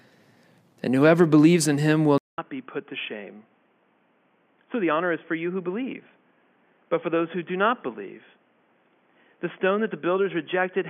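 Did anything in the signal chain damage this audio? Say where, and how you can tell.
Yes. From 2.18 s, after "believes in him will", a 200 ms silence gives way to sound capped at 3.4 kHz, around 10 dB quieter, with a new noise floor about 40 dB down. That points to a likely input switched to a poorer device. A codec or filter wouldn't also change the level and noise.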